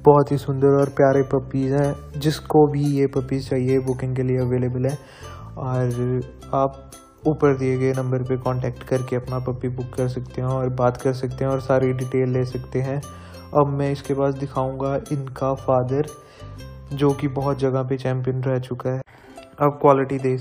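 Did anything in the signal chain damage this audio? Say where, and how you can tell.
No, nothing in the signal chain can be heard damaging this audio. No stage leaves an audible mark on the sound.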